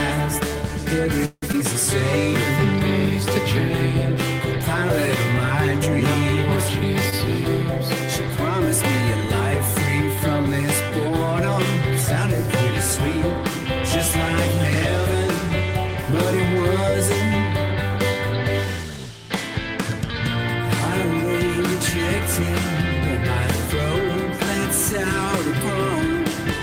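At 1.25 s the sound stops moving forward and the last moment is held as a fading buzz. About 40 ms of it goes fully silent. At 1.44 s the audio resumes exactly where it stopped. This is a call audio freeze, likely from packets delayed in transit until the jitter buffer ran dry. It inserts a gap of about 0.17 s and loses nothing.

From 1.52 to 1.55 s there is a skip ahead. Roughly 70 ms of audio is dropped, and the two sides are joined by only a tiny fill. The jump trims back much of the delay the freeze had just added.

At 7.10 to 7.14 s comes a short stall from a late packet. One packet missed its slot, so the current sound is stretched by 20 ms until the packet arrives. The sound lingers slightly with a slight buzz or dip. Nothing is lost.

From 16.82 to 17.86 s a jitter buffer speed-up runs. The receiver trims tiny pitch-period slices again and again, about 40 ms in total. Playback runs about 3% fast at unchanged pitch.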